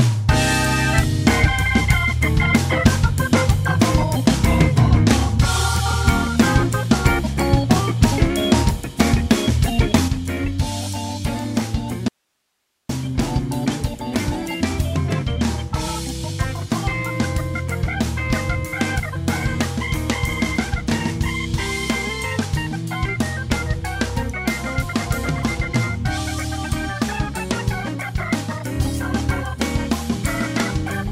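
At 10.08 s the sound abruptly drops by about 6 dB and stays at that lower level through to the end. This is a one-channel dropout: one stereo channel has likely been lost, so only half of the shared material survives in the mono sum.

From 12.08 s to 12.89 s the sound cuts out completely for about 0.81 s, leaving only faint hiss far below the normal level before it returns mid-flow. This dropout to a faint residue likely comes from the wanted signal breaking while the downstream path stayed live.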